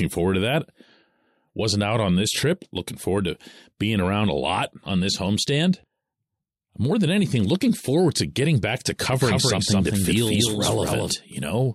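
From 9.13 s to 11.13 s, just after "to getting back to", the speech gains a dry, somewhat quieter second copy trailing about a fifth of a second behind, switching on and off abruptly. This doubled audio track most likely comes from a second, slower capture path.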